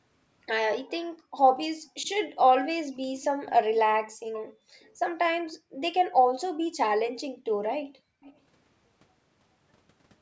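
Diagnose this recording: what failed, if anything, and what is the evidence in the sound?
Call processing is at fault: the background is gated by the echo canceller. The room sound drops by about 40 dB at 1.13–2.03 s, 4.52–6.17 s and 7.87–8.22 s, recovering after each. The canceller is suppressing the microphone hard while the far-end loudspeaker plays.

A delayed copy of the speech trails the original by 363 ms from 2.03 to 5.53 s, about 20 dB down, and again at 8.22–8.37 s, 424 ms late and about 25 dB down. This is likely an echo leak from incomplete echo cancellation at the loudspeaker end.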